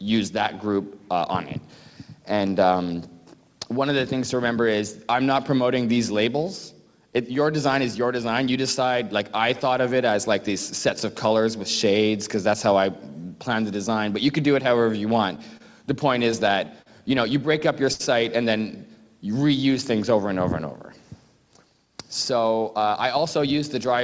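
From 15.36 to 18.02 s come scattered short gaps: around seven lost or late packets, the longest roughly 70 ms, each patched by extending the preceding sound. They come through as brief ticks and smears. A spectrogram shows short smeared or frozen columns, and the waveform shows small repeated-looking stretches.

Overlapping this, from 17.15 to 19.96 s, the jitter buffer slow-down repeats single pitch periods or pause fragments to rebuild its reserve, adding 66 ms. Playback runs at 98% speed with pitch unchanged, so the sound drags slightly. Spectrogram harmonics stretch sideways, and the waveform shows near-identical cycles recurring.

From 21.85 to 23.48 s a jitter buffer speed-up removes short pieces of one or a few pitch periods to shed surplus delay, cutting roughly a tenth of a second. The sound hurries at 106% speed. Spectrogram features compress horizontally, and the waveform shows cycles quietly skipped. 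Throughout, the call path leaves nothing above 8 kHz, consistent with G.722 at 64 kbps.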